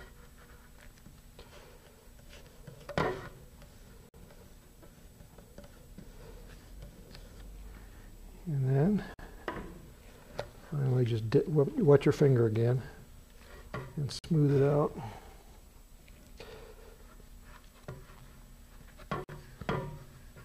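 Gap between chunks at 4.09, 9.14, 14.19 and 19.24 s: hard-edged 50 ms silences every 5 s, where separately delivered audio chunks are joined with silence left between them.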